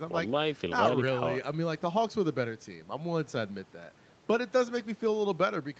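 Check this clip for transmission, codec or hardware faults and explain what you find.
Nothing here points to a transmission, codec or hardware problem, just ordinary speech that has come through a normal call path, with the top end stopping at about 8 kHz as you'd expect from that kind of connection.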